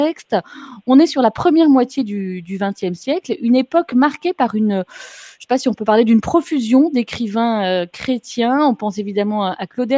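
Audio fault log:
No faults detected in this clip.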